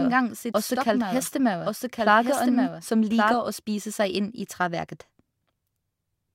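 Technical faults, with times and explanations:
0.0–3.34 s, doubled audio track: already running when the clip begins, a second full-band copy trails the original by about one second at around 5 dB lower, likely from a slower capture path recording the same audio again. It carries no decay or room colour, unlike an echo, and stops abruptly at 3.34 s.
1.22–1.28 s, corrupt frame decoded: over roughly two frames, energy appears at frequencies that do not belong to the surrounding sound, peaking at roughly -15 dBFS. Damaged data in the compressed stream was decoded anyway. The result is a brief spurious sound.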